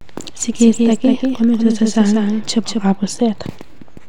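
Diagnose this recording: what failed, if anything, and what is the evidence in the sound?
From 0.53 to 2.95 s the speech is shadowed by a full-band copy trailing about a fifth of a second behind, a few dB quieter, with no room colour and abrupt onset and cutoff: a doubled audio track, likely a second, slower capture path mixed in at the driver level.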